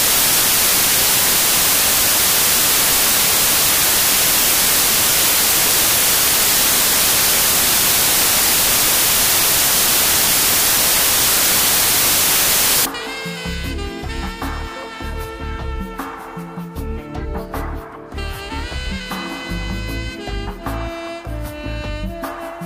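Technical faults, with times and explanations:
0.0 to 12.85 s, samples built from the wrong bytes: the reader assembled each sample from its bytes in the wrong way, whether shifted by one byte, with the byte order reversed, or with the alignment misjudged. The rapidly fluctuating low-order bits end up as the most significant part of every value, so the audio is buried under loud, harsh broadband noise that comes close to white noise on the loud passages.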